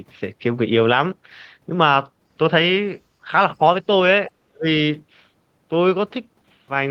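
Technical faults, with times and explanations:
4.46 to 4.67 s, speech suppressed in double talk: the echo canceller was likely unable to tell the near talker apart from loudspeaker echo while both sides spoke at once, so its suppressor clamped down on everything it heard. The speech level falls sharply, bottoming out at around 35 dB below its surrounding level, and the voice stays down for about a fifth of a second before recovering.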